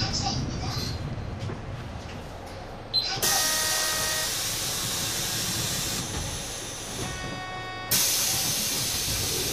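No technical faults are audible.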